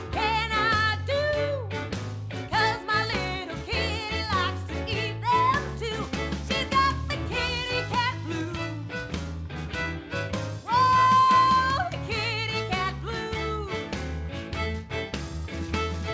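No technical faults occur at any point, and the audio arrives by way of a call path whose band stops at 8 kHz, which fits a wideband codec such as G.722.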